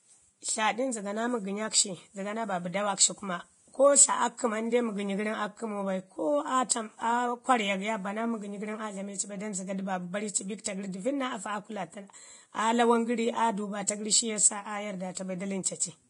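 The whole speech clip has a hissy, grainy quality, most likely from heavy Vorbis compression at a low bitrate, somewhere around 30 kbps. Nothing gets through above about 10.6 kHz, so the top end feels dull. The treble that survives has been quantised so coarsely that its fine detail turns into noise, which gives the sibilants a rough, sandy texture and takes the clean edge off consonant attacks.

On top of that you get pre-echo in four places: at 6.69 s, at 10.64 s, from 15.15 to 15.17 s, and from 15.63 to 15.65 s. Each one is a short puff of hiss, 18 to 22 ms long, just ahead of a sharp onset. The codec spreads its quantisation noise across a whole transform block. Because the attack lands late in the block, noise sized for the loud part leaks into the quiet moment before it, so each hit sounds smeared rather than crisp.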